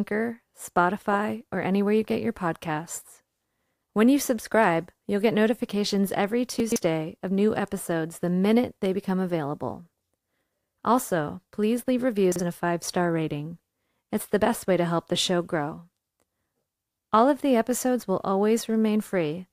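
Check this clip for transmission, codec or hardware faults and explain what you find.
There are two spots where the chunks play out of order, at 6.6 to 6.76 s and 12.32 to 12.4 s. A block of speech, which fits 40 ms chunks, turns up late, three chunks behind the first time and one the second. Nothing's missing, but the reshuffle makes a brief jumbled stutter.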